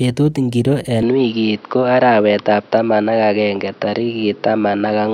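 At 1.03 s the speech changes character and stays that way to the end. Everything above 5.8 kHz disappears, so the sound turns dull and boxy. There is no gap at the change. The level shifts by a few decibels, and a new noise floor appears, about 30 dB below the speech. This is likely an input switched to a poorer device, a second microphone with narrower bandwidth and its own background noise.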